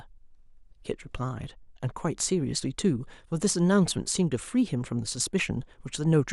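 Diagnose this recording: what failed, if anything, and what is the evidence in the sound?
Across the whole speech clip the top end sounds dull and plainly gurgly, with a granular roughness on the voice. That's likely MP2 compression at the codec stage, with upper sub-bands starved of bits and switched off, which fits a rate around 80 kbps.

Then at 5.63 to 5.70 s there's a short burst of burbling, the classic DAB burbling. Bit errors at a small fraction of a percent slipped past error correction into the MP2 stream, so wrong samples put short blips of noise into individual sub-bands over what sounds like a handful of frames.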